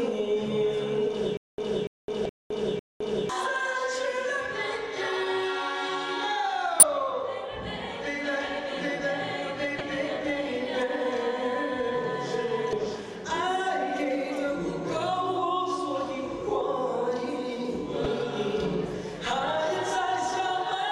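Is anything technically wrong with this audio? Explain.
Yes. From 1.37 to 3.29 s there is a stutter with silent gaps, likely from a stalled player retrying. It replays a 288 ms fragment four times, each followed by about 212 ms of dead silence, every 500 ms.

Damaged data in the compressed stream breaks decoder sync at 2.22–2.26, 6.79–6.83, 9.77–9.81, 12.70–12.73 and 18.03–18.06 s, each heard as a brief chirp or blip.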